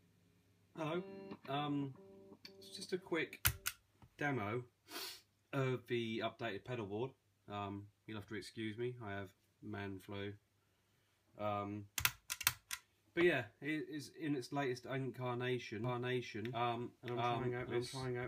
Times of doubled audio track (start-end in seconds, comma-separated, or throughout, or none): 15.84-18.27